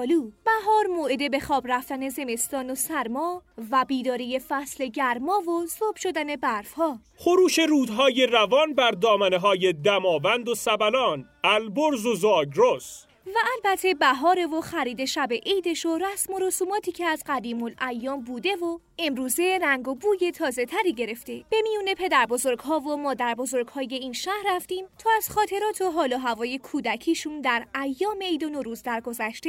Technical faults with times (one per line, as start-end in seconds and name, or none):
none